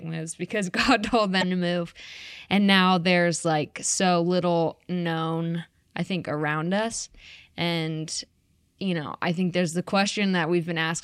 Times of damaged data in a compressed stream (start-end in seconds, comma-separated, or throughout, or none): 1.38-1.43